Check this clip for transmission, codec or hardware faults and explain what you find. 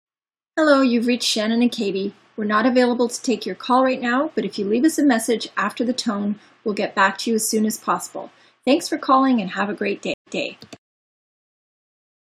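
One transmission fault is present. At 10.14 to 10.42 s, a stream reconnect: the connection dropped, leaving 125 ms of flat-line silence, then a fresh decoder resumed 163 ms earlier, repeating audio with a faded-in onset.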